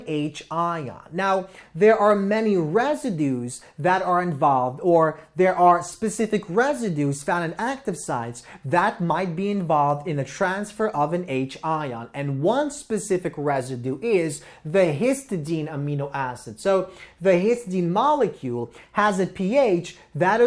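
No technical fault can be heard anywhere in the audio; the signal stays continuous and steady throughout.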